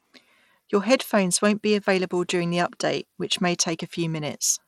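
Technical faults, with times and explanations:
Throughout, Bluetooth SBC compression: the speech has gritty, grainy noise riding on it, with the treble thinning and flickering. That's likely SBC squeezed into a small bit budget, fitting roughly 96 kbps, so the top sub-bands get few bits and everything else is coarsely quantised.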